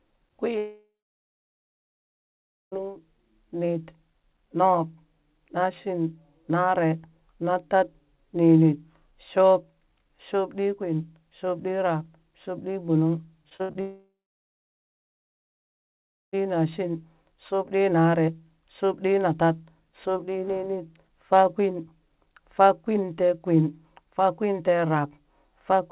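From 0.58 to 2.74 s a long network dropout is likely: the last sound smears into a fading buzz, then about 1.8 s of silence, and roughly 2.1 s of the speech never returns. From 13.50 to 13.77 s, repeated packet loss leaves four short holes, the longest 73 ms, patched by continuing the previous sound. About half the span is concealed, so it sounds choppy. A second long network dropout likely follows from 13.81 to 16.35 s, again with a brief decaying fill, about 2.2 s of silence, and some 2.5 s of speech lost. Throughout, the narrowband call path cuts everything above 4 kHz.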